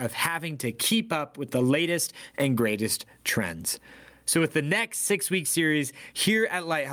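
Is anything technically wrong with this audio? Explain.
Yes. Gain pumping runs throughout: likely excessive input gain driving a fast limiter, so the gain swings around 25 dB, rising between phrases and ducking under each loud syllable, squashing the speech.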